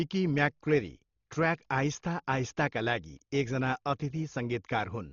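From start to finish the speech is dull, with nothing above 7 kHz, and a rough, fluttering noise sits around voiced tones. The likely cause is heavy Dolby Digital compression, at a rate that points to about 32 kbps. Starved of bits, the encoder narrows the band and leaves many frequency lines without mantissa data. The decoder fills those lines with dither noise. That filled-in noise sets it apart from a simple low-pass filter, which would only dull the sound.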